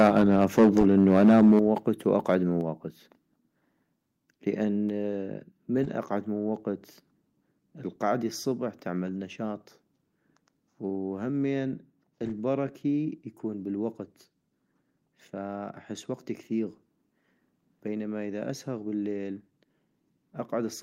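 Speech clip with microphone overload for the first 1.59 s: peaks run about 8 dB past the converter's ceiling, and around 7% of samples are flattened, giving harsh crackle, likely from input gain set too high. The microphone volume then steps down at 0.59 s (about 2 dB), 1.6 s (about 7 dB) and 2.61 s (about 3 dB), with voice and background dropping together, likely the call software pulling the input level back after the clipping.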